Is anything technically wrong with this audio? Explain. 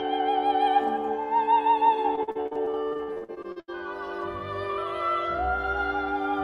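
Yes. From 2.15 to 3.70 s there is repeated packet loss, heard as a robotic sound. Packets went missing again and again over this stretch, nearly twenty times. Each hole was covered by extending the last stretch of audio, and the next hole arrived soon after. About 600 ms was patched this way, close to 40% of the span. The longest hole lasts 79 ms. The result is choppy sound with pieces missing.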